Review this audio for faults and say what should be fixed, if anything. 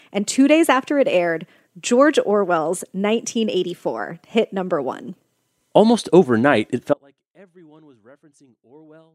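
An audio dropout to a faint residue starts at 6.94 s, right after "overnight it", and lasts to the end. The speech cuts out abruptly. Only a faint sound remains, some 35 dB below it. The likely cause is a lost signal feeding a path that stayed live. Secure cables and connections, and monitor the input throughout recording.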